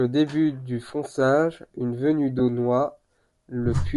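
Bluetooth LC3 compression runs throughout the speech and is plainly audible, likely from LE Audio transport. The coder discards much of the upper spectrum and substitutes shaped noise, which gives consonants and vowels a grainy, breathy edge, consistent with a 10 ms frame size and a bitrate near 48 kbps.

Lost LE Audio frames occur at 0.89 s, just after "début du", and again from 2.39 to 2.41 s, after "une venue". Each gap fits one missing 10 ms frame. The decoder patches it by reusing the previous spectrum with scrambled phase, so each brief spot turns into a short noisy smear.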